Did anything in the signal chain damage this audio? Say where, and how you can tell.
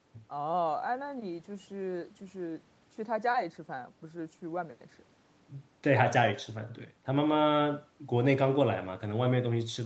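No, nothing in the signal chain damaged this speech. The call's microphone processing and codec did their normal work, and the spectrum stops at 8 kHz, which fits a wideband Opus call setting rather than any damage.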